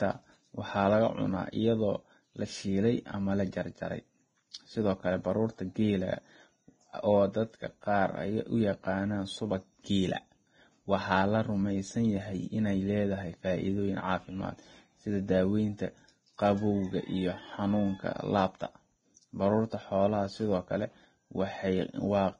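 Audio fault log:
throughout Vorbis compression: grainy, hissy speech with nothing above 9.7 kHz, likely heavy Vorbis coding at a low rate (fits roughly 22 kbps) turning treble detail into noise.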